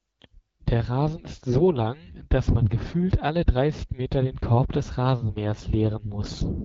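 AMR bit errors strike the speech from 1.48 to 1.66 s, a burst of about 0.18 s. Over that stretch the less protected bits of the AMR-WB frames came through corrupted, around 7 percent of them, while the check on the critical bits still passed, so the decoder trusted the damaged frames. Its excitation pulses landed in the wrong positions and the fine gain, pitch and spectral values drifted, leaving the voice at roughly the same pitch and loudness but hoarse, scratchy and gargly. The surrounding HD Voice coding, which fits a 12.65 kbit/s rate, is heard only as a light codec texture.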